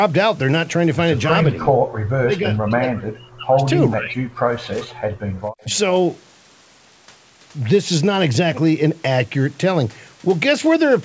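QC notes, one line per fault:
1.54–1.79, 2.12–3.64, 3.94–4.35 and 5.64–5.73 s, speech suppressed in double talk: the voice sinks by about 20 dB in the first stretch, about 40 dB in the next two and about 5 dB in the last, most likely because an echo canceller, hearing both sides at once, pulled down the talker along with the echo.
5.01–5.36 s, background gated by the echo canceller: the room sound drops by about 40 dB and then returns, because the canceller clamped the microphone hard while far-end audio played through the loudspeaker and released it once that audio stopped.
5.59–5.77 s, echo leak: a faint delayed copy of the voice, about 30 dB below the speech and trailing by 436 ms, comes through. This is likely residual loudspeaker pickup that the far end's echo canceller failed to remove and sent back.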